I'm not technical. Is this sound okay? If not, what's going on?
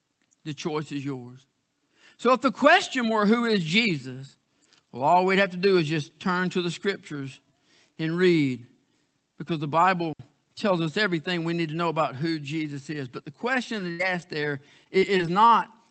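No. There are two separate problems, both in speech.

At about 10.13 s the sound drops out for roughly 66 milliseconds. That is a digital wireless dropout: the digital wireless link to the receiver briefly lost too much data, so the receiver simply muted. What tells it apart from other glitches is how clean it is. There is a tidy hole of near silence, with no crackle or hiss before or after it, and it happens only once.

From about 13.73 s to 15.30 s the speech turns choppy. This is repeated packet loss, which gives a robotic sound. The audio travels over the internet in small pieces, and six of those pieces went missing in quick succession. The longest gap was 77 milliseconds. The call software covered each gap by stretching out the last bit of sound it had, rebuilding about a fifth of a second in total. Unlike the dropout, these gaps are partly filled in rather than silent, and they keep coming, so a short stretch sounds mechanical and choppy, with pieces missing.

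The call connection itself, which keeps sound only up to about 8 kHz, is not one of the faults.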